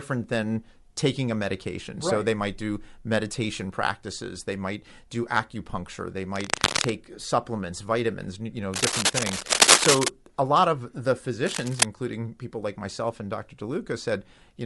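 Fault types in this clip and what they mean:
Bluetooth LC3 compression: The whole clip carries a breathy, grainy edge on the speech, and the damage is plainly audible. The likely cause is the LC3 codec of Bluetooth LE Audio. At this rate it drops much of the upper spectrum and fills the gaps with noise. The texture fits a bitrate around 48 kbps with 10 ms frames.
Lost LE Audio frames: One brief dropout comes at 1.86 s, right after "than taking a". Its length fits a single lost 10 ms frame. The decoder covers the gap by repeating the last spectrum with scrambled signs. That repetition fills the gap rather than leaving a silent hole. The loss is too short for the gradual fade into silence that a long run of lost frames would bring.
Cable scratch noise: Dense, uneven bursts of rustling sit over the speech three times. The first runs from 6.35 to 6.95 s, after "might do acupuncture they". The second runs from 8.74 to 10.08 s, after "supplements vitamins you know". 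The third runs from 11.46 to 11.85 s. The bursts are roughly as loud as the speech, and the middle one is a little louder. The likely cause is a worn cable or connector shifting, with its contact resistance jumping rapidly.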